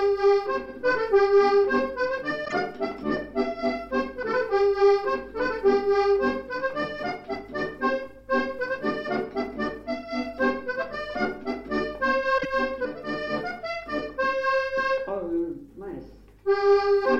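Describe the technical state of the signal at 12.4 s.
Frames out of order from 12.38 to 12.45 s: two adjacent single frames of about 26 ms were decoded in swapped order, so this short stretch plays with its halves exchanged. It sounds like a brief garbled flutter. No time is lost.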